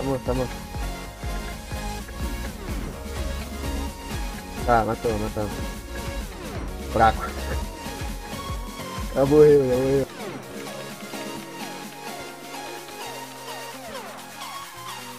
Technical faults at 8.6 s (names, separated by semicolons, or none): none